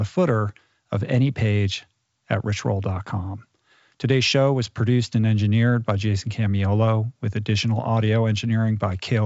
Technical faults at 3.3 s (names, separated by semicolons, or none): none